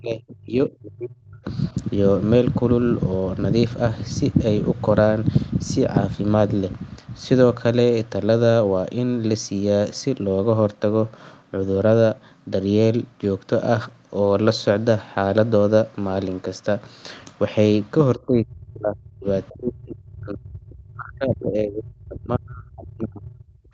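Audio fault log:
0.00–1.45 s, 18.14–19.26 s and 19.52 s to the end at 23.73 s, speech suppressed in double talk: the speech abruptly sinks, dropping by about 35 dB at its deepest, and comes through thinned and broken into pieces rather than holding a steady level. The likely cause is an echo canceller facing both ends talking at once. Unable to separate the near talker from the returning loudspeaker echo, it turned everything down while the far side spoke.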